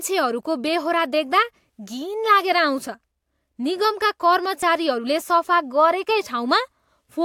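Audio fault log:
4.63 s, audio missing between chunks. About 10 ms of the speech drops out, and the two sides join with no gap. It is heard as a brief skip. The likely cause is processing in 3-second chunks losing a moment at a handover.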